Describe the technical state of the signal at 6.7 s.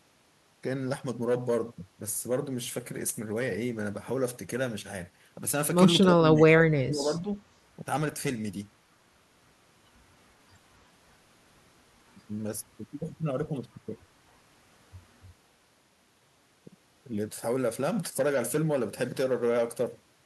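At 6.7 s the speech sits inside a stretch of speech suppressed in double talk, running from 6.01 to 7.3 s. The level sinks by as much as about 25 dB, with roughly a second of sound affected. The likely cause is an echo canceller mistaking the talker for loudspeaker echo while both ends spoke and attenuating everything. On a waveform the envelope dips. A spectrogram shows the upper bands thinning or vanishing in patches.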